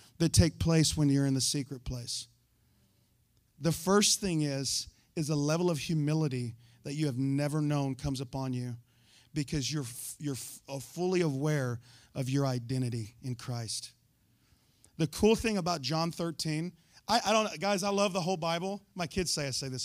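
No technical faults can be heard anywhere in this speech recording; the signal stays intact and continuous throughout.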